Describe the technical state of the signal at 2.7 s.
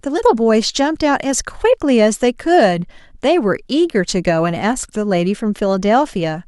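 At 2.7 s the speech signal is intact, with no audible technical fault.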